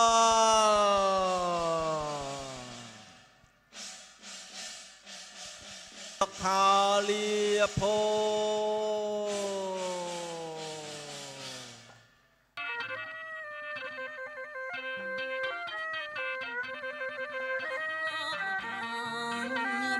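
Nothing here trips the ear at any point; the audio just runs along without a single technical glitch worth pointing out.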